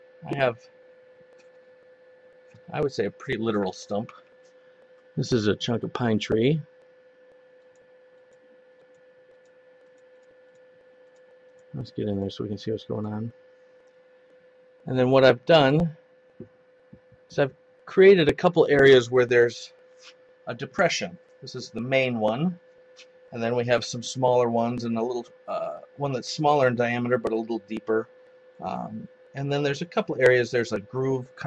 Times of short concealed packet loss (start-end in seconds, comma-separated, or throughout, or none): none